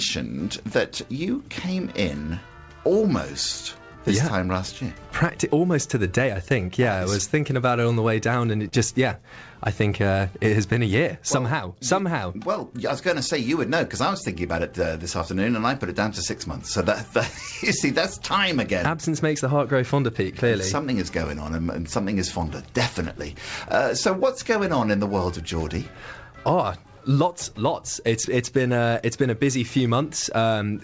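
Audio carried over a call path, with nothing above 8 kHz, which fits a wideband codec such as G.722. The fault is short concealed packet loss at 8.68 to 8.74 s: about 40 ms of audio failed to reach the decoder in time, and the receiver patched the gap by extending the preceding sound for roughly 40 ms before crossfading back into the real signal. The result is a brief smear or wobble where the original detail is missing.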